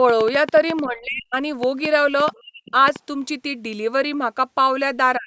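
From 0.09 s to 2.97 s a train of clicks runs over the speech: around twenty sharp pulses of similar shape, arriving about 5.9 times per second but at uneven spacing, with the strongest roughly 10 dB above the speech itself. They tick through pauses as well as words, which points to an external source, likely electrical interference or a faulty connection or power supply injecting the same transient repeatedly.

Between 0.86 s and 1.37 s the talker's speech is suppressed in double talk. For about half a second the level falls away, at its deepest by roughly 30 dB, so the voice dips. This is likely the behaviour of an echo canceller that cannot separate near-end speech from loudspeaker echo while both sides are active and clamps down on everything.

At 2.33 to 2.39 s a brief scrap of the other side's voice leaks through, very faint at roughly 35 dB below the speech: likely residual loudspeaker echo the canceller failed to remove. 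Immediately after, from 2.39 s to 2.74 s, speech is suppressed in double talk again, the drop reaching roughly 40 dB over about 0.3 s so the voice nearly vanishes. A final, shorter dip of similar depth cuts the last 0.1 s, from 5.17 s to the end. The call microphone processing limits the audio to 8 kHz and below.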